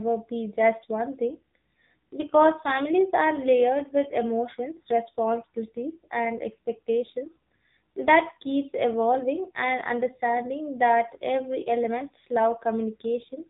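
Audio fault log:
throughout AMR narrowband mobile codec: speech squeezed through a starved mobile coder, consistent with 6.7 kbps; nothing above 3.8 kHz survives, leaving it buzzy and synthetic.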